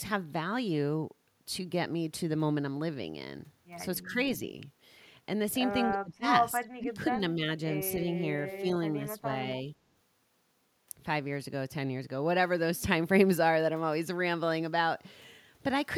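The speech dips in five short bursts: 4.03 to 4.14 s, 5.92 to 6.26 s, 6.6 to 6.99 s, 7.18 to 7.41 s and 9.16 to 9.26 s. The deepest cuts, near 6 s and just before 7 s, pull the level down by roughly 25 to 30 dB. The others are milder. This is likely speech suppressed in double talk. The echo canceller mistook the talker for returning echo while the far side spoke, and ducked the voice.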